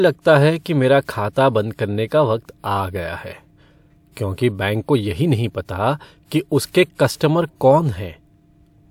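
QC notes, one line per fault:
1.33, 6.69 and 7.16 s, pre-echo: a brief hiss runs ahead of a sharp onset, over 34, 50 and 48 ms, the first between "है कि मेरा" and "बंद करने का वक्त", softening each attack. The transform codec spread quantisation noise across the block, into the quiet before each attack.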